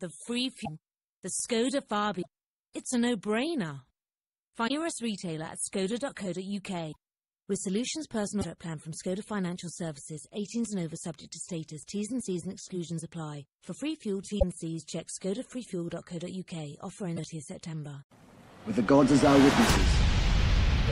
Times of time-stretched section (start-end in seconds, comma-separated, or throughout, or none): none